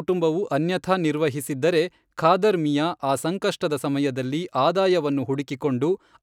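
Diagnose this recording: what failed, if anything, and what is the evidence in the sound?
Nothing in the recording stood out as a fault on careful listening, so there is no failed stage to point to.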